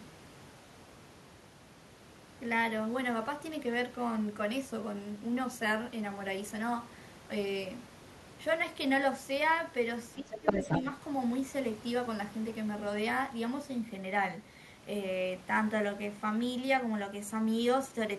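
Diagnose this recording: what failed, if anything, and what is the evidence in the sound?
Speech suppressed in double talk, at the call-processing stage. From 10.19 to 10.68 s the talker's level dips sharply, by about 15 dB at the deepest point, with roughly 0.4 s affected in total. This coincides with a second voice entering. The likely cause is the echo canceller failing to tell near-end speech from loudspeaker echo during overlap and attenuating the whole microphone signal, taking the talker down along with the echo.

Other side's voice leaking through, also in call processing. From 10.31 to 10.82 s a second voice is audible over and around the dipped talker, sitting at around 5 dB relative to the talker's level, so it is prominent rather than faint. It overlaps the suppression window and runs slightly past it. The likely mechanism is incomplete echo cancellation: far-end audio played on the talker's loudspeaker reaches the microphone and survives the canceller into the transmitted signal.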